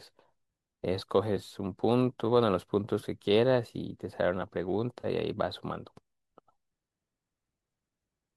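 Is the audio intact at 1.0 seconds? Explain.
No. At about 1.00 s there is AAC frame loss with concealment: a 10 ms gap, consistent with one lost frame, which the decoder patched from the previous good spectrum. Unlike a true dropout, it is not silent but a brief smeared, noisy blur.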